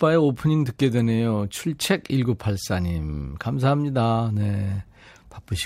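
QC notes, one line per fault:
No technical faults are audible in the speech signal at any point.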